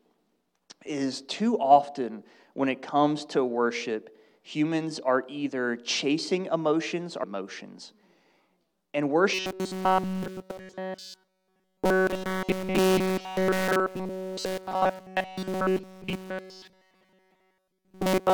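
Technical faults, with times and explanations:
9.34 to 18.34 s, robotic sound from repeated short buffers. The sound turns into a rigid, metallic buzz fixed at 188 Hz through the whole span. The likely cause is one slice of about 5.3 ms replayed over and over while new audio is skipped.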